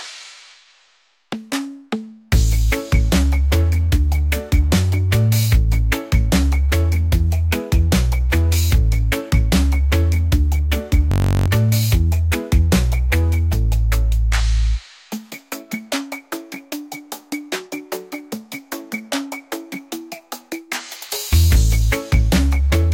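From 11.12 s to 11.48 s the audio is replaced by a system hang loop. The host or driver stopped supplying data while the output hardware kept replaying its ring buffer, so one 21.33 ms fragment repeats 17 times, which fits a 1024-sample buffer. A loop this short is heard as a steady buzz at 46.9 Hz rather than a stutter. Around 0.4 s of the original sound is lost.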